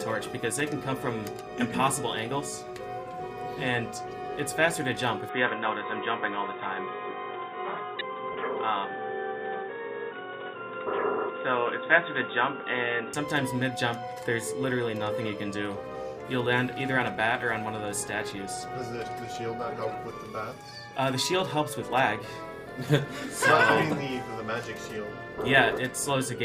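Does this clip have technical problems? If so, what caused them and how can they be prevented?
Yes. Corrupt frame decoded: damaged compressed frames were decoded anyway, placing energy at wrong frequencies, heard as a faint blip at 4.08 s and a louder chirp from 7.99 to 8.01 s. Protecting the stream with error detection and concealing bad frames instead of decoding them prevents this.

Input switched to a poorer device: the input likely changed to a narrower-band device, so from 5.29 to 13.14 s the sound turns dull, with nothing above 3.8 kHz and a faint added hiss. Locking the input device so the system cannot fall back to a headset profile avoids this.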